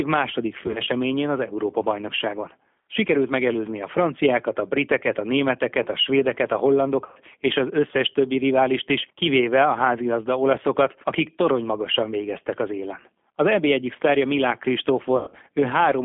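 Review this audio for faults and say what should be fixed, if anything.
The whole clip runs through the G.729 codec at 8 kbit/s. The speech is confined to a phone band of roughly 200 Hz to 3.4 kHz. The sound is rough and plainly synthetic because the decoder rebuilds it from a filter, a pitch predictor and a few pulses per frame. To prevent this, carry the call on a wideband codec such as Opus or G.722.

VoIP packet loss concealed by the speech codec occurs three times. At 0.67 to 0.89 s, about 80 ms is missing, scattered over 200 ms. At 7.06 to 7.19 s, about 100 ms is lost between "németeket a svédeket a" and "és az összes többi". At 15.17 to 15.36 s, about 140 ms is lost, with one 100 ms run. In each case the decoder stretches the last sound into a fading buzzy tone or coloured noise, and the speech stays weak briefly afterwards. To prevent this, fix the network loss and add a jitter buffer or forward error correction.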